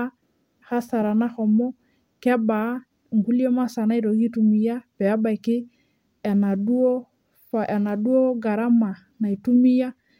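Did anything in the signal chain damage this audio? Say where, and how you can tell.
No, none of the stages from capture to playback left any audible damage on this speech recording.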